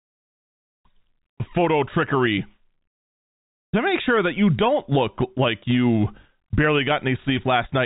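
No faults heard in this speech clip; it carries the narrowband sound of G.711 telephone coding, with nothing above about 3.8 kHz.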